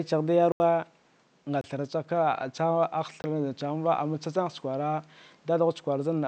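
Blocks of digital silence cut in at 0.52 to 0.60 s (80 ms), 1.61 to 1.64 s (28 ms) and 3.22 to 3.24 s (20 ms). Each is a hard drop to silence, most likely from an output buffer not filled in time. Unlike a faded dropout, even the room noise, about 37 dB below the speech, vanishes completely during each gap.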